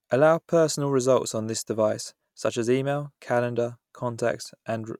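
No technical faults are audible.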